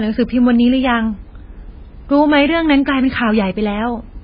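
MP3 compression runs throughout the speech, likely from a very low-bitrate encode, plausibly around 16 kbps. Nothing survives above 5 kHz, so the treble is cut off, and weak frequency lines flicker on and off between frames, leaving a heavily watery, swirling texture with smeared consonant attacks.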